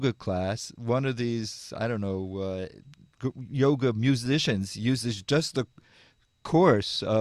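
No technical faults are audible.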